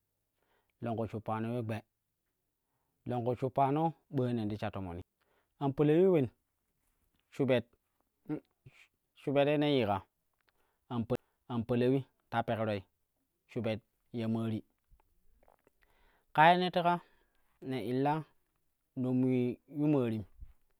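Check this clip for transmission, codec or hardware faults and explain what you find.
Two CD skips break the speech, at 5.02 s and again at 11.16 s. Each time the laser has jumped to another turn of the disc's spiral, so the player mutes for about 10 ms and resumes from a different point. You hear a short tick followed by an abrupt jump in the speech. Unlike a network dropout or packet loss, the sound doesn't simply fall silent and pick up where it stopped. It continues from a displaced position.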